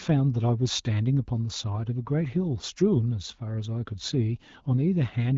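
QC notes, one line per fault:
No faults heard.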